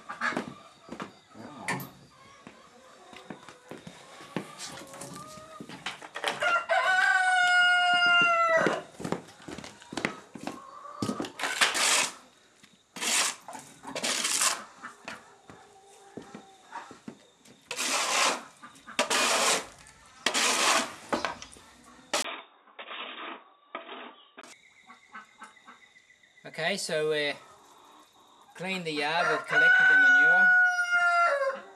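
At 22.22 s the sound turns dull and boxy. Everything above 3.8 kHz is gone. A brief gap of about 20 ms comes right at the change. The level drops a few decibels, and a faint new background noise sits well below the sound. This is likely an input switched to a poorer device, a narrower-band microphone or headset path taking over. At 24.43 s the full bandwidth returns and the sound clears again.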